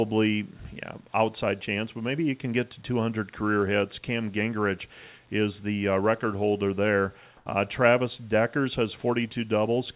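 From 7.37 to 7.46 s, the faint background, about 36 dB below the loudest speech, turns into a steady, featureless hiss for 90 ms, shifting level by about 1 dB. This is likely comfort noise in place of the background: transmission paused and the receiver synthesised filler noise.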